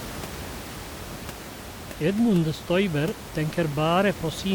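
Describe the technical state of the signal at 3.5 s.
The speech at 3.5 s is intact, with only the room's own background noise sitting about 14 dB below it.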